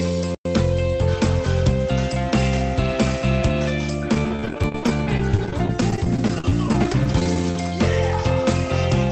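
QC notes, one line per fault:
4.14–7.56 s, repeated packet loss (robotic sound): dozens of dropouts, each up to 35 ms. Each is patched with the previous sound, giving a choppy texture.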